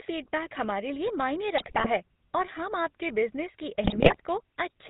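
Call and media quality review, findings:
Buzzy, gravelly roughness on all speech, nothing above 4 kHz, damage plainly audible. Component: GSM full-rate codec, consistent with its 13 kbps mode. Vocal-tract filter driven by a sparse, regularly spaced pulse excitation, so fine spectral detail is lost and harmonics turn rasping.

Squawks, pops and gargling, 1.58 to 1.87 s, between "हमारे लिए मायने" and "है और हम आपके". GSM bit errors: corrupted filter, pitch and gain values distort the spectrum and spike the level on nearly every frame in the span.

Same squawking and gargled breakup, 3.84 to 4.21 s, just after "हम आपके बिज़नेस की". GSM bit errors again. The hits are slightly longer here, pointing to a weak radio link delivering flipped bits straight into the decoder.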